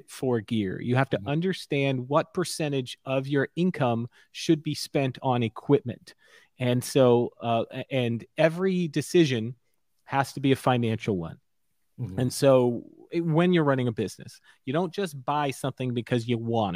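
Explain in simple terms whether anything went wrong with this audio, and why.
Nothing went wrong with this recording of speech; no technical fault can be heard anywhere in it. There is nothing here that needs fixing or explaining.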